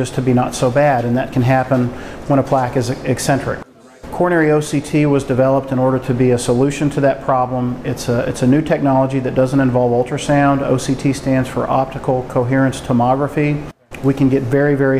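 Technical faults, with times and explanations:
Nothing stood out as a technical problem on listening.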